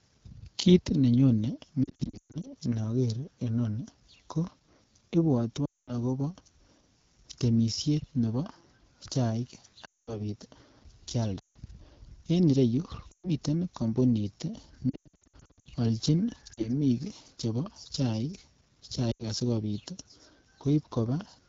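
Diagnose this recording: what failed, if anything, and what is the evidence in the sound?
AMR wideband (HD Voice) codec damage runs through the whole recording at the codec stage. The speech is plainly rough and raspy, which fits AMR-WB's low 8.85 kbit/s mode, where the pulse-driven vocal tract model is starved of bits.

Lost AMR speech frames, a network-stage fault, occur at 1.83–2.48 s (just before "inoker inoni ko"), 5.65–5.93, 9.85–10.29, 11.40–11.56, 13.11–13.30, 14.90–15.69, 16.53–16.71 and 19.11–19.23 s. Failed frames made the decoder repeat the last good settings with falling gain, producing warbles and rapid fades.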